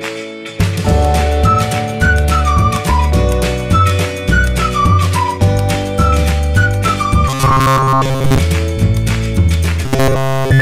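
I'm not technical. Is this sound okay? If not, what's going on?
No. From 7.28 to 8.38 s, and again from 9.85 s to the end, the sound turns into a stiff, metallic buzz at a fixed pitch near 134 Hz. This is robotic sound from repeated short buffers, likely caused by audio arriving too slowly and about 7.5 ms snippets being replayed instead.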